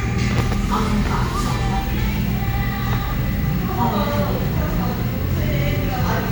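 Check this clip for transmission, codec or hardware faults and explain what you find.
One fault is present: video or display buzz, running from 1.81 s to the end of the clip at 6.32 s. A rough, steady buzz at 59.94 Hz sits under the sound, with a layer of hash spread above it and a thin, very high whine at 15.7 kHz. It sits about 15 dB below the sound itself. The cause is a screen or video cable coupling into the audio path, injecting the picture's field rate and its scan-line rate.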